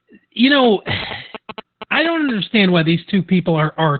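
Throughout, the speech sounds muffled, hoarse and slightly robotic, with nothing above 4.5 kHz. This is heavy Opus voice compression in narrowband SILK mode, consistent with a bitrate around 8 kbps. From 0.64 to 2.31 s, a galloping dit-dit-dit of short 217 Hz buzzes sits roughly 10 dB below the speech. These are GSM signalling bursts from a nearby 2G phone, rectified by the audio circuitry.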